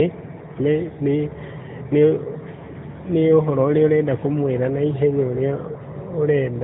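Speech clip with AMR narrowband mobile codec damage throughout: nothing above 4 kHz, plus a buzzy, synthetic edge that a plain low-pass wouldn't add, consistent with a high-rate mode near 10 kbps.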